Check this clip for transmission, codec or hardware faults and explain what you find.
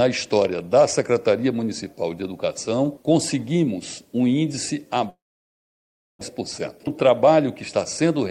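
Two faults stand out: an abrupt loss of audio lasting about a second, followed shortly by a stretch that plays back hurried.

From 5.09 s to 6.23 s there is a long network dropout, likely caused by packets failing to arrive. The receiver extends the last sound as a decaying buzz, then leaves near-silence for about a second before audio resumes, with about one second of material gone. On a spectrogram, a smeared, fading copy of the preceding spectrum gives way to an almost empty band. The waveform flattens to near zero.

From 6.41 s to 7.62 s a jitter buffer speed-up follows. After the gap the buffer was holding roughly a tenth of a second more audio than its target, so the receiver cut out short pitch-period slices repeatedly to catch up. Altogether around 70 ms was removed, and playback runs at about 106% speed with unchanged pitch, so the sound feels slightly rushed. The waveform shows tiny splices and a compressed rhythm. 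The spectrogram keeps its harmonic spacing but events arrive closer together.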